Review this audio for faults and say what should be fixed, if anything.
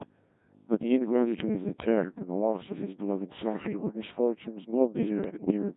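Codec 2 vocoder, throughout the speech: the whole clip sounds robotic and buzzy, which fits the 1.6 kbit/s mode. Only pitch, voicing, energy and a spectral envelope survive, and the decoder rebuilds the voice from sine waves, so the original waveform is gone and the damage is heavy. To prevent it, use a higher-rate codec, or a mode that keeps the waveform, wherever the link allows.

Bit errors on digital voice radio, 3.49 to 3.95 s and 5.24 to 5.51 s: the synthetic voice lurches in pitch, level and tone colour and breaks into warbling gibberish. Corrupted bits change the parameters of whole frames, at a few percent in the first burst and noticeably more in the second. To prevent it, keep the radio within reliable coverage and use stronger forward error correction on the vocoder bits.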